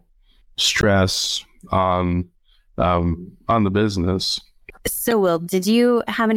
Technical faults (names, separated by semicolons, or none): damaged data in a compressed stream